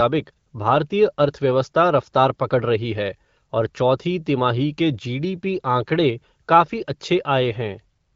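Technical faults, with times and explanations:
No technical faults are present, with no times or explanations to give.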